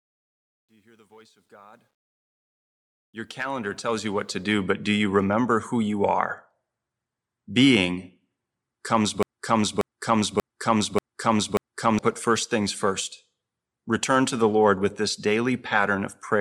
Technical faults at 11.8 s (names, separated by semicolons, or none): broken-record loop